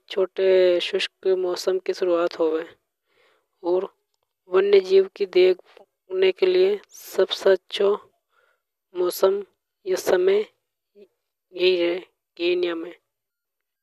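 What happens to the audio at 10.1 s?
Nothing goes wrong at 10.1 s: the speech carries on intact through that moment, with no dropout, click, distortion or other fault.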